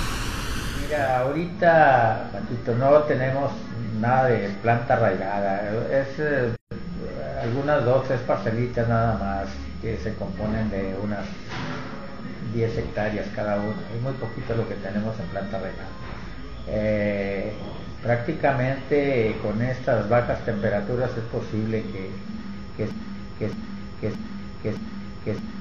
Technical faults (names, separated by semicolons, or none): gap at a join of encoded pieces; broken-record loop